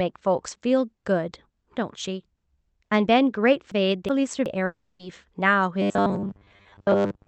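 Around 3.72 s the sound gets briefly jumbled. You're hearing chunks out of order: a piece about 370 ms long went missing from its slot and turned up one chunk late, so the stretch up to about 4.46 s plays in the wrong sequence. Nothing's actually lost, but the reshuffle leaves three hard joins, and the speech sounds garbled until the order rights itself.

Almost immediately after, from 4.65 to 5.01 s, there's what sounds like a long network dropout. Roughly 340 ms of real audio never arrives, and the receiver papers over the whole gap by continuing the last sound as a buzzy hiss that fades away. It never falls to true silence, and when the speech picks up again the missing piece is simply gone.

From 5.82 s to the end, the speech goes rigid and metallic. This is the robotic sound from repeated short buffers, and the likely cause is audio arriving too seldom, with the software looping the last few milliseconds to fill in. 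The buzz sits at 100 Hz, which fits a 10 ms buffer being repeated. Most of the real audio in this stretch is skipped, so the sound only loosely follows the speech. Throughout, the call codec's band limit applies: nothing comes through above about 8 kHz, which fits Opus at a modest bitrate.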